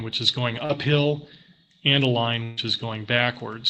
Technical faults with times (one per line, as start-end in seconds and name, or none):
0.65-0.70 short concealed packet loss
2.43-2.58 burst of packet loss